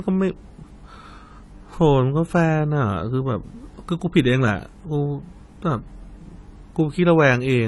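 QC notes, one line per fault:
throughout: low-bitrate audio saved at a high bitrate. Nothing sounds above 11.5 kHz, so the speech sounds dull. A spectrogram shows a flat, hard ceiling there for the whole clip. The likely cause is a 32 kbit/s-style encode re-saved as high-bitrate MP3, which cannot restore the removed band.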